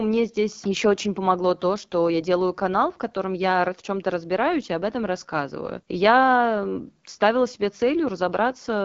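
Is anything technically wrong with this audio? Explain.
Yes. Throughout the speech, the AMR wideband (HD Voice) codec is plainly audible. Content stops at 7.5 kHz, and the voice sounds rough and raspy, as the vocal tract model runs short of bits. This points to one of the lowest modes, near 8.85 kbit/s.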